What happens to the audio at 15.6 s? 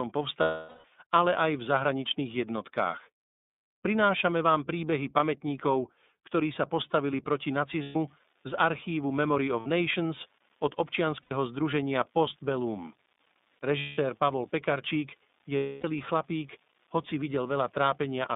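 From 15.56 to 15.85 s, about 270 ms, lost iLBC frames leave a gap that the decoder fills by repeating the last pitch cycle blended with noise and fading it. The result is a held, buzzy, slightly breathy vowel, and that length fits nine 30 ms frames. Because each iLBC frame decodes independently, normal sound returns almost immediately after 15.85 s.

Underneath, an unreliable data bit, present from 7.58 s to the end, adds equal-sized spikes at random samples, heard as a continuous crackle or fizz that persists through the concealed gap.

The whole passage also carries iLBC codec coloration: band-limited to roughly 200 Hz to 3.7 kHz, with a plainly rough, synthetic quality from coding each 30 ms frame independently.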